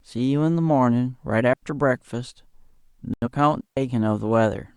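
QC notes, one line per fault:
1.53–1.63 s and 3.61–3.77 s, digital wireless dropout: the wireless link lost too much data and the receiver muted for about 93 ms, then about 161 ms. Each mute is a clean hole of near silence in the speech with a very short fade and no noise burst on either side.
3.14–3.28 s, digital broadcast dropout: the receiver stopped getting usable frames and muted until valid ones returned. The speech cuts to silence and resumes with about 85 ms of programme missing, which fits two dropped frames. Whatever was said in that gap is lost.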